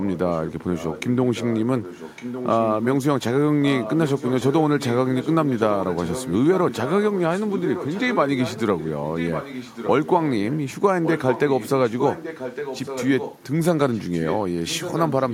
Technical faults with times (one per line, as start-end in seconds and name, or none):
0.00-2.87 echo leak
3.62-10.58 echo leak
11.03-13.41 echo leak
13.93-15.33 echo leak